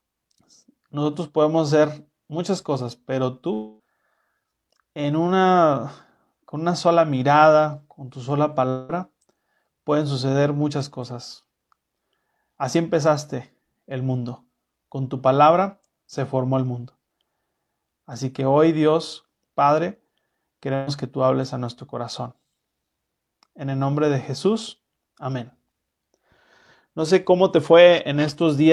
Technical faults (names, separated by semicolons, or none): long network dropout; burst of packet loss